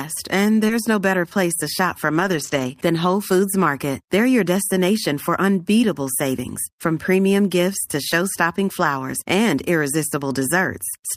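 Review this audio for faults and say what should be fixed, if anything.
Short concealed packet loss occurs at 0.67–0.71 s, just before "no better place." About 20 ms of audio never reached the decoder in time. The receiver extended the preceding sound to cover the gap and then crossfaded back into the real signal, which produces a brief smear at that spot. To prevent it, give the jitter buffer enough depth to absorb late packets on this link.

Lost packets rebuilt from error correction occur twice. The first is at 0.69–0.71 s, overlapping the concealed loss above: a single 20 ms frame was recovered from the low-bitrate copy carried in the following packet. The second and longer stretch runs 2.15–2.69 s, right after "shop for," with about 280 ms rebuilt across what sounds like a run of separate 20 ms losses. Because these frames are decoded from the reduced-quality redundant copy, they sound rougher and noisier than the surrounding audio. 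To prevent it, address the packet loss on the network path so that the decoder rarely has to fall back on in-band FEC.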